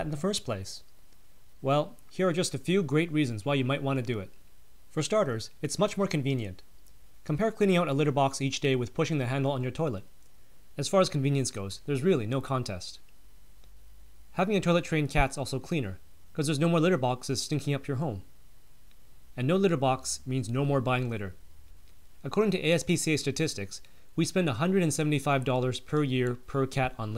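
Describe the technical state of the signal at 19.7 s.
At 19.7 s the signal sits inside a run of periodic USB or driver dropouts lasting from 0.66 s to 26.63 s: once a second, something stalls the transfer, and a tiny fraction of a millisecond of audio is skipped, leaving a regular tick wherever sound is present.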